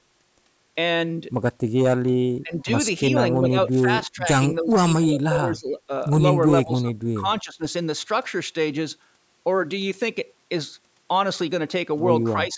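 Speech suppressed in double talk: an echo canceller, likely unable to separate the talker from echo during overlapping speech, turns the speech down. The speech dips and breaks into pieces, dropping by up to about 20 dB, at 2.43–2.7 s, 3.09–4.28 s, 4.59–5.92 s, 6.5–7.63 s and from 12.34 s to the end.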